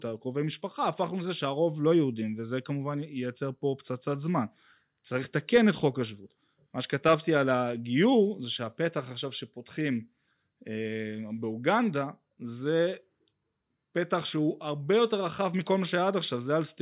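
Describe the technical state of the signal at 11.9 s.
At 11.9 s the speech signal is intact, with no audible dropout, distortion, glitch or other technical fault at that moment.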